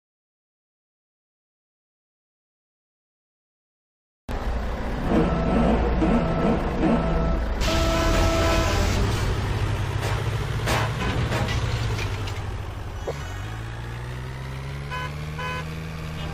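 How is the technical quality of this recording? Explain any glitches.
Two brief glitches break the recording, both from damaged data in a compressed stream. At 8.95 s and again from 11.00 to 11.02 s, the sound gives way to a short chirp or blip. In each spot, part of the encoded stream was corrupted, so the decoder misread those frames, lost its sync and had to hunt for the next valid frame header before clean playback resumed.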